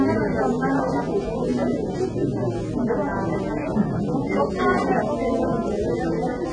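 From start to finish the sound is dull and smeared, with a watery, warbling texture on sustained parts and a fizzy edge on noisy ones, pointing to heavy AAC compression, likely AAC-LC at a very low bitrate, which fits about 16 kbps. Starved of bits, the encoder discards everything above 9.7 kHz and quantises the remaining bands coarsely. A spectrogram shows a flat ceiling at 9.7 kHz, with patchy holes and blocky smearing below it.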